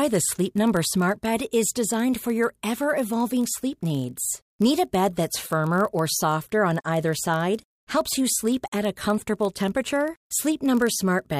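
Speech with a block size mismatch (padded) throughout: short zero-filled gaps in every block give a 43.1 Hz buzz, which fits 1024-sample reads, and slow it to 0.999x.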